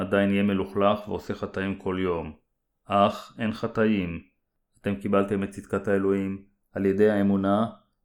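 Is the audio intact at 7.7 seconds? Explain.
No, the channels drift apart across the whole clip. Their clocks disagree slightly, so by 7.7 seconds the delay approaches a fifth of a millisecond, and summed to mono it gives slow flanging.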